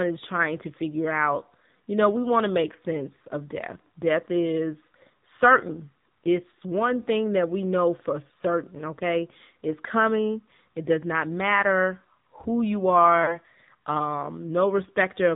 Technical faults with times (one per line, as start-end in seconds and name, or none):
0.00-15.35 AMR narrowband mobile codec
13.24-13.38 lost AMR speech frames